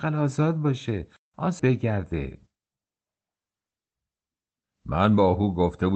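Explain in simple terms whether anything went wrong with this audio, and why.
Around 1.6 s the speech suddenly jumps forward, with no pause or gap where it happens. This is a skip ahead. Roughly a second of audio was thrown away, either lost in transit or dropped by the jitter buffer (the small waiting area that smooths out uneven network delivery) when it overflowed. Newer audio was already queued, so playback joined the two sides of the missing second almost directly.

From 1.69 s to 3.13 s the talking sounds rushed, about 12 percent faster than normal, yet the pitch of the voice stays the same. This is a jitter buffer speed-up. The buffer was holding more audio than it wanted, so the receiver trimmed out many tiny slices of sound, each one or a few vocal vibration cycles long. Together these cuts removed about a fifth of a second to catch up.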